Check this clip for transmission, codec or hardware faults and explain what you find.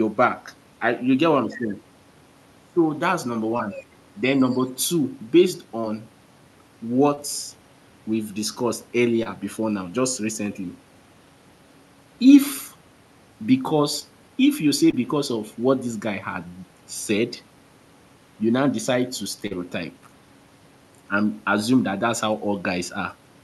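Short concealed packet loss occurs seven times, at 3.57, 5.81, 7.15, 9.23, 13.99, 14.91 and 19.47 s. Each time, about 20 ms of speech arrived too late, or 40 ms at 19.47 s. The receiver extended the preceding sound and blended back into the real audio. Each gap is a brief smear or wobble, and a consonant may vanish. The speech also carries the Opus call codec's usual coding noise, with the top end rolling off near 12 kHz.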